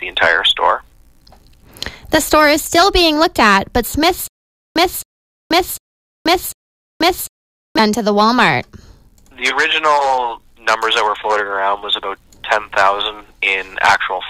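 From 4.28 to 7.79 s, stutter with silent gaps: a 266 ms burst repeats four times with 483 ms of digital silence between, unlike a gapless loop, likely from a stalled stream.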